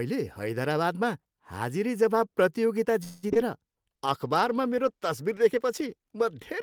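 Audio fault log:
3.03–3.37 s: repeated packet loss (robotic sound). It comes right after "हैदराबादमा हाजिरीजवाब प्रतियोगिता". Four gaps open within about a third of a second. The longest lasts 196 ms. Most holes are filled by stretching the last stretch of sound, about 219 ms in total. That covers roughly two thirds of the span. Another 61 ms simply drops out. The repeated patching gives a choppy, robotic texture with small pieces missing.
3.96–6.62 s: call bitrate drop. The bandwidth estimate falls, and the encoder goes from 32 kbps to 15 kbps. It stays at the lowest rate for about 2 s, up to the end of the clip. With far fewer bits, the speech is coded more coarsely. The upper frequencies are trimmed as well. The speech turns rough and muffled, with a watery edge that does not clear before the end.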